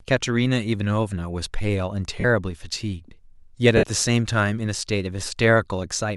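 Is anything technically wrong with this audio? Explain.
Yes. Lost LE Audio frames at 2.20–2.24 s (about 38 ms) and 3.77–3.83 s (60 ms): the decoder recycled the last spectrum with randomised signs, smearing speech into noisy hiss, seen as blurred, structureless spectrogram patches with a fading waveform envelope.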